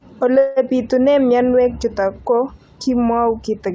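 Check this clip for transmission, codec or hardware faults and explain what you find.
There's one fault, a call audio freeze, heard in speech that has passed through a call codec cutting everything above 8 kHz, which fits G.722 at 64 kbps. From 0.38 to 0.58 s the sound hangs as a fading buzz or hiss for about 184 ms, then carries on where it stopped, now that much later. The likely cause is delayed packets draining the jitter buffer, with the receiver stretching the last sound until they arrived.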